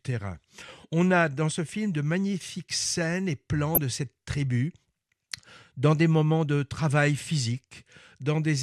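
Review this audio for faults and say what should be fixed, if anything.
DAB burbling at 3.75 to 3.78 s, between "magnifiques scènes et plans" and "de cette tribu": uncorrected bit errors corrupt MP2 samples, making sub-bands blip across about two frames. To prevent it, improve the DAB reception with a better antenna or positioning, or capture from a cleaner feed, so the error correction catches the few remaining errors.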